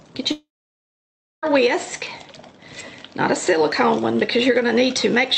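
From 0.31 to 1.44 s, the sound trails off into a brief fading buzz, then near silence for about a second, likely a long network dropout concealed by the receiver.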